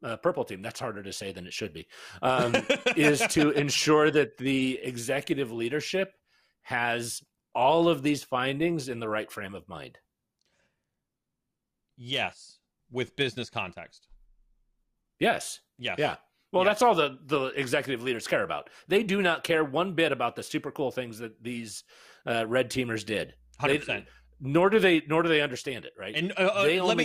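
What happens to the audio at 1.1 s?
Nothing goes wrong at 1.1 s; the audio plays through that moment cleanly, with no dropout, click, distortion or other fault to be heard.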